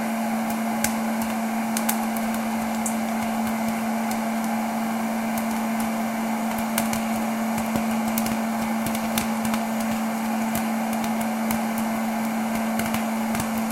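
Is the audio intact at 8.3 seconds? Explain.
Yes, the audio is intact at 8.3 seconds, with no dropout, click, distortion or other fault to be heard at that point.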